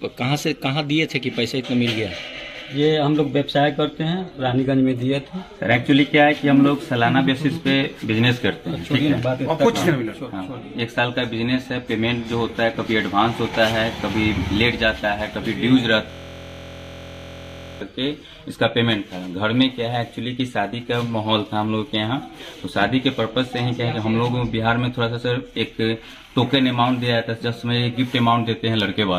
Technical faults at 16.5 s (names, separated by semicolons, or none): system hang loop